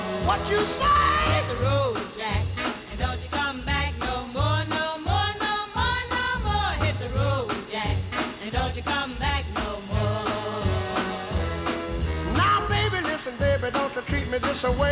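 Nothing stood out on listening; the sound comes across as expected for a call line, with the top end stopping at about 4 kHz as that path's coding leaves it.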